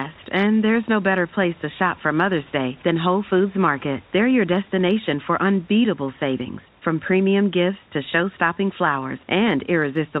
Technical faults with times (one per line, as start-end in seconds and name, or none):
none